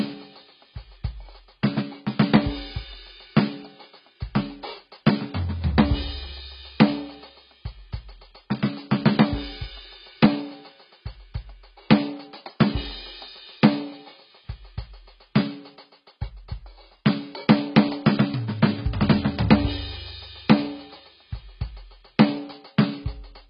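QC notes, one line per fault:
Throughout, AAC compression: the music is dull and heavily smeared, with nothing above 5.2 kHz. The likely cause is AAC-LC at a very low bitrate, which fits about 16 kbps. The encoder lowers its cut-off and coarsely quantises what remains.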